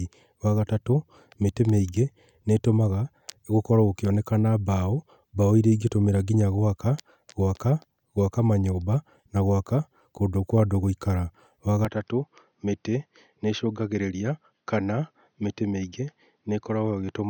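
From 11.85 s the speech dulls and drops a few decibels, input likely switched to a poorer device; spectrogram loses everything above 6.3 kHz.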